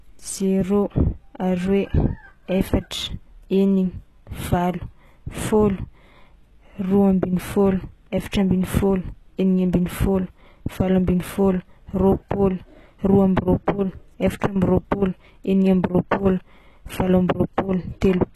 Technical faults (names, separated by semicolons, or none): HE-AAC compression